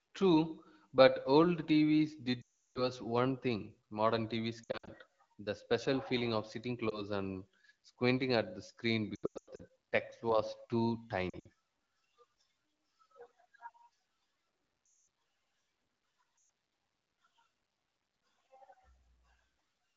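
Lost AMR speech frames break up the speech at 2.41, 4.63, 6.90, 9.15, 11.29, 14.85 and 16.37 s. Damaged frames were replaced by repeating the last good settings at falling gain. Long runs, near 2.41 and 14.85 s, drop to near silence within two frames. The single lost frame at 6.90 s gives a brief dip or warble.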